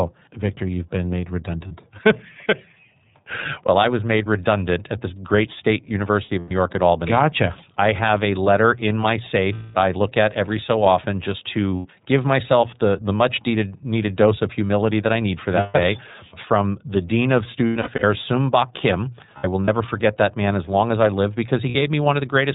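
Throughout, the speech sounds slightly rough and synthetic, with nothing above 4 kHz. This is plainly audible iLBC codec damage, consistent with 30 ms frames at roughly 13.33 kbps.

Brief held, buzzy or breathy vowel-like sounds replace the speech at 1.68 s (30 ms), 6.27 s (150 ms in bursts across 240 ms, longest about 100 ms), 9.54 s (210 ms), 11.76 s (90 ms), 15.59 s (150 ms), 17.67 s (210 ms in bursts across 360 ms, longest about 100 ms), 19.38 s (120 ms in bursts across 300 ms, longest about 70 ms) and 21.69 s (60 ms). These are lost iLBC frames. When packets went missing, the decoder repeated the last pitch cycle mixed with noise, and the fill fades on the longer gaps. The speech snaps back right after each gap because every frame decodes independently.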